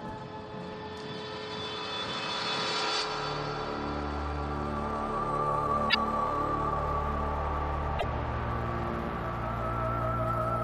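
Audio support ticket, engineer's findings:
Two short glitches, 5.87–5.95 s and 7.96–8.04 s. Damaged data in a compressed stream: corrupted frames misread by the decoder, which loses sync and resyncs on the next header.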